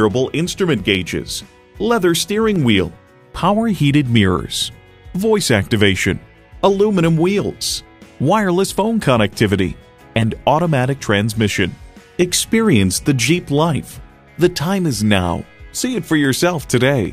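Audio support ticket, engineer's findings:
Regular clicks every 0.805 s, 0.14 to 17.05 s, about twenty. Likely clock drift buffer slips between unsynced devices, about 15 samples dropped or repeated each time. Evenly spaced vertical broadband lines on the spectrogram.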